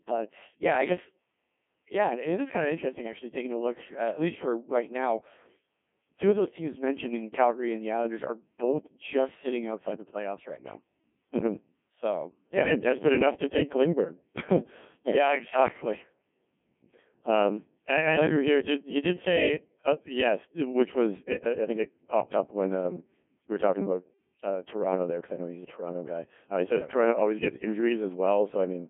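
Codec 2 vocoder damage runs through the whole clip. Only pitch, voicing, energy and a spectral outline survive, so the decoder rebuilds the speech from sine waves. The result is heavily robotic and buzzy. The band runs from 150 Hz to 3.4 kHz, with nothing above 3.7 kHz, consistent with a 1.6 kbit/s mode.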